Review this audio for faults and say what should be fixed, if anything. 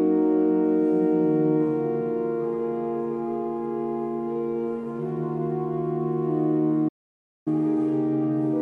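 A playback stall silences the audio from 6.88 to 7.48 s, a gap of about 0.58 s, likely because the player ran dry or its thread was blocked. The waveform flattens to silence, and the spectrogram shows a clean blank vertical band. Larger playback buffering and keeping the audio thread unblocked would prevent it.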